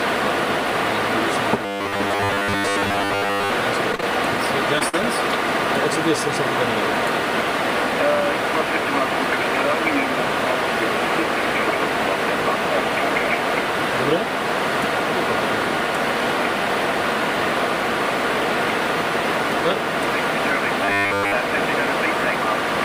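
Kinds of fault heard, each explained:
Robotic sound from repeated short buffers: Audio likely arrived too seldom, so the player kept repeating a short buffer for most of each stretch. At 1.65–3.50 s and 20.85–21.35 s this imposes a rigid, metallic 100 Hz buzz, which fits a 10 ms buffer.
Short concealed packet loss: Packets missed the decoder, and the receiver bridged each hole by extending the preceding sound before blending back. Gaps of 10 to 30 ms at 3.92, 3.95–4.00, 4.01–4.03, 4.79–4.81 and 5.02 s come through as brief smears or wobbles.
Burst of packet loss: A run of audio was lost or came too late, and concealment carried the last sound forward while fading it. At 4.88–4.94 s about 40 ms goes missing, heard as a short held buzz or fading hiss before the audio resumes further on.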